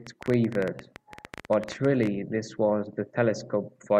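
From 0.07 to 2.08 s, a train of clicks: about thirty unevenly spaced ticks at 13.5 per second, some 10 dB above the speech, likely interference.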